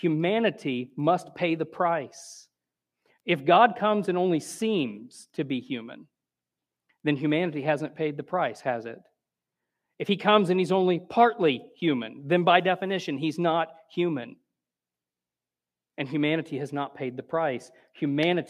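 Throughout the speech, the 48 kHz to 44.1 kHz conversion was done with the resampler restarted on every block, treating each 100 ms block in isolation. Each block edge therefore carries a small error, heard as regular ticks at 10 per second wherever signal is present.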